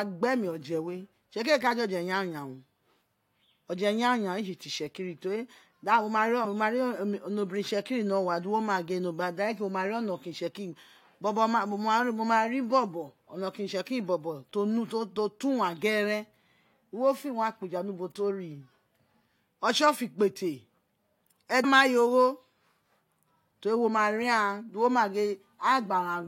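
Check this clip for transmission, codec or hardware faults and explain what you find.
Two faults turn up, both compressed frames skipped. At 6.44 s and 21.63 s the speech jumps ahead, losing roughly 100 ms and 150 ms. That fits whole 21.3 ms frames, about five and seven, going missing or being rejected by the decoder.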